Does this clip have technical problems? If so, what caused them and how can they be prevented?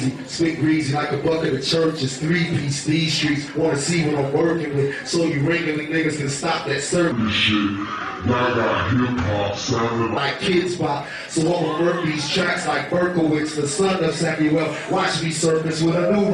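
Yes. From 7.12 to 10.17 s there's a section at the wrong speed: it plays at 0.71x, so the sound sags roughly seven semitones and drags until normal speed returns. The likely cause is that stretch being played back against the wrong clock. Check sample rates match across every editing and playback step.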